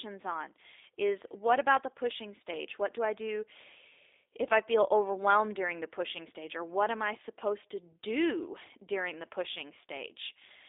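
From start to finish the speech carries G.729 codec damage: a roughly 8 kbit/s pulse-and-filter reconstruction, likely G.729A, giving a buzzy, slightly synthetic timbre. The spectrogram shows nothing below 300 Hz or above 3.7 kHz, with smeared, blocky harmonics.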